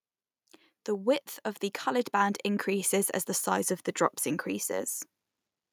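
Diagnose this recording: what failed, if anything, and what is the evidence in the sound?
From 0.85 to 3.77 s, speech and background swell together by about 7 dB before "the drops": automatic gain rising, as call-processing gain control lifts a quiet input.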